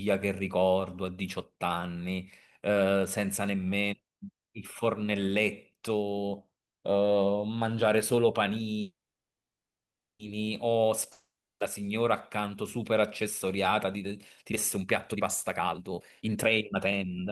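At 8.81 s there's a call audio freeze. The sound carries on as a short fading buzz, then about 1.28 s of silence until 10.21 s. Packets were likely held up and the jitter buffer ran dry, so the audio resumes where it stopped, 1.38 s late, with nothing lost.

From 11.12 to 11.62 s comes a long network dropout. The last sound fades briefly into about 0.35 s of silence, and when the audio returns, half a second of it is simply gone. Most likely no packets arrived for that stretch, so the receiver had nothing to play.

Then from 14.41 s to 17.26 s there's a jitter buffer speed-up. The buffer had built up excess delay, and the receiver kept trimming tiny pitch-period slices to catch up. The speech runs at about 145% speed at unchanged pitch, sounding rushed, with around a second and a half cut overall.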